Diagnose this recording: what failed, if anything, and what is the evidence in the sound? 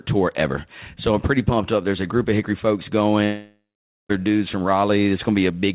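Network stage: a long network dropout is the likely cause. From 3.24 s to 4.11 s the speech turns into a fading buzz that extends the last sound. Once concealment gives out, about half a second of near silence follows. Audio resumes at "dudes from" with 0.86 s lost.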